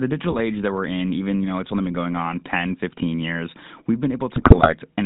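GSM full-rate codec, throughout: pulse-driven vocal-tract modelling, nothing above 4 kHz, which fits a 13 kbps coder, gives the speech a buzzy, gravelly roughness. GSM bit errors at 0.30–0.41 s and 4.36–4.73 s: corrupted filter, pitch and gain values distort the spectrum frame by frame, producing squawks, pops and gargling, longer and denser in the second burst.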